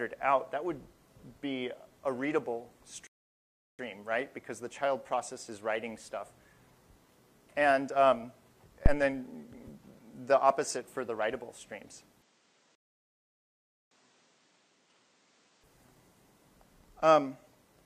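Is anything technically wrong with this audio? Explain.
Yes, the audio has three kinds of fault.

Rebuffering stall, 3.07 to 3.79 s and 12.75 to 13.91 s: the player ran out of downloaded data and waited for more, so the sound drops to silence and then resumes exactly where it stopped. Nothing is skipped, but the first gap adds 720 ms and the second about 1.16 s. A waveform shows a flat line with clean edges, and a spectrogram shows a blank vertical band.

Phantom power thump, 8.86 to 8.99 s: a supply was switched on a live input, and the voltage step passed through the coupling capacitors. The result is a deep, short thud that dies away over about 30 ms. On a waveform it appears as a single large, lopsided low-frequency excursion that settles quickly. On a spectrogram it is a brief burst of energy concentrated at the very bottom of the frequency range.

Input switched to a poorer device, 12.21 to 15.63 s: the sound turns duller and boxier and drops by roughly 10 dB, with no gap at the changeover. 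The likely cause is a switch to a lesser microphone or a headset profile. Nothing is present above 9.1 kHz, and a new noise floor sits around 30 dB below the signal. A spectrogram shows a hard horizontal ceiling at 9.1 kHz, and the waveform envelope shrinks. The second stall falls inside this stretch.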